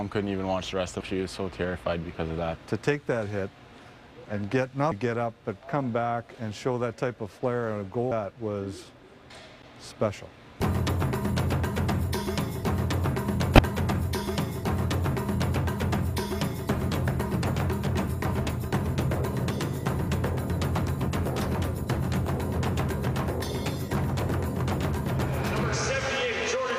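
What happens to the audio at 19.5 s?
At 19.50 s, damaged data in the compressed stream makes the decoder lose frame sync, producing a brief glitch.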